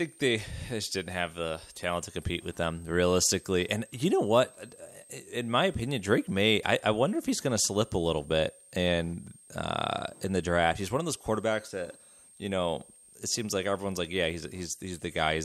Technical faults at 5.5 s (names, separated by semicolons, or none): switching supply whistle